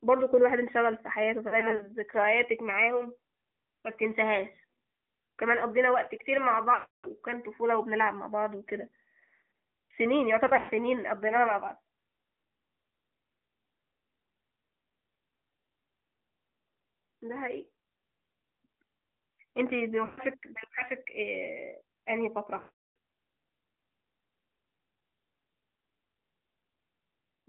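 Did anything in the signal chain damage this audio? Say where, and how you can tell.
Yes. At the codec stage, an AMR narrowband mobile codec at 10.2 kbps leaves a buzzy, synthetic texture, and the spectrogram shows energy confined to 150 Hz to 3.5 kHz.

At the network stage, lost AMR speech frames occur at 1.48–1.90 s, 6.74–7.09 s, 10.48–10.71 s, 20.06–20.21 s and 22.58–22.95 s. The decoder reuses stale pitch with falling gain, so the waveform shows smeared, decaying envelopes, and the 300 ms and 380 ms runs sink to silence.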